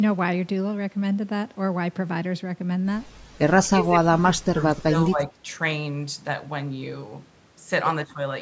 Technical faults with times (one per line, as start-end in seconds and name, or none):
3.56-3.93 speech suppressed in double talk
4.19-5.39 speech suppressed in double talk